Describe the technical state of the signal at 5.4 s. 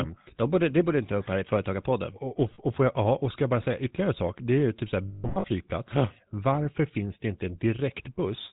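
At 5.4 s the sound is caught in a rough, metallic ringing. Steady tones are held and buzz instead of moving on, with brief returns to normal in between. These are lost GSM frames, spanning 5.08 to 5.46 s, just after "ju typ så här". When a frame goes missing, the decoder reuses the last good frame's settings at decreasing level. About 260 ms of gaps are scattered over 360 ms, with the longest run around 150 ms. That is not long enough to reach full silence. The total fits roughly 13 missing 20 ms frames.

Underneath, and through the whole clip, the speech has a plainly audible buzzy, gravelly coarseness and nothing above 4 kHz, which gives it a dull, narrow top. This is the GSM full-rate codec at 13 kbps. It models the vocal tract and excites it with a sparse, regularly spaced pulse train that keeps only a third of the excitation samples, so the fine detail of the voice is replaced by that grainy buzz.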